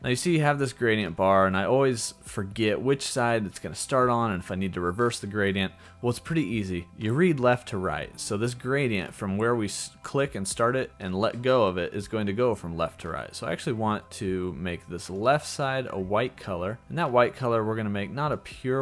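Listening closely, nothing in the audio stood out as a technical fault at any point.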